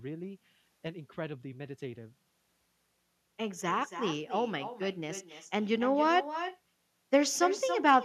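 From start to finish there's echo with no canceller: the far end is playing the call over a loudspeaker and its mic feeds it straight back. Everything spoken returns roughly a third of a second later, about 12 dB down and thinner.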